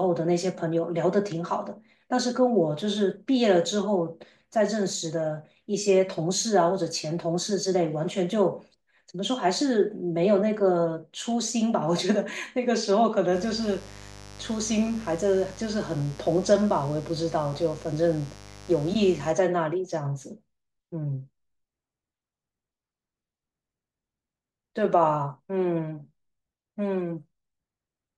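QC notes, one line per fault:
13.31–19.34 s, mains buzz: switching spikes from a dimmer, rectifier or unshielded lead inject 50 Hz harmonics into kilohertz range, giving a raspy buzz roughly 20 dB under the speech.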